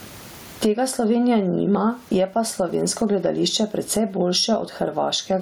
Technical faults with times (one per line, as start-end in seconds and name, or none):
0.00-5.41 gain pumping